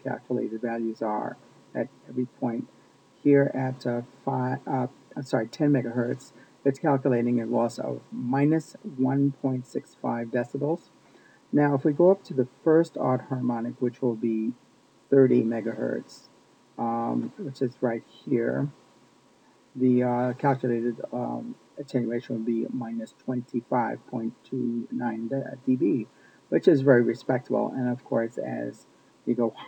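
Throughout the clip, imaging from linear upsampling dulls the top of the band, with a faint metallic shimmer above it. The rate was raised by joining samples with straight lines, which filters poorly, leaving a mirrored copy of the spectrum between 12 kHz and 24 kHz, roughly 50 dB down. This fits a 24 kHz source raised to 44.1 kHz. Unlike aliasing, nothing folds down into the main band; the stray energy sits only above 12 kHz.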